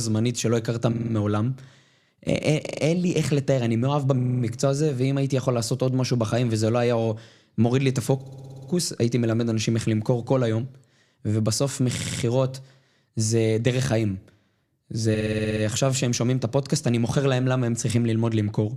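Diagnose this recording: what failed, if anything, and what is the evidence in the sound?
Repeated frames in the compressed stream: runs of coded frames reached the decoder more than once, so 40 to 60 ms blocks of speech replay as stutters at 0.92–1.13, 2.65–2.81, 4.18–4.42, 8.21–8.69, 11.97–12.21 and 15.14–15.63 s, each adding 160 to 480 ms.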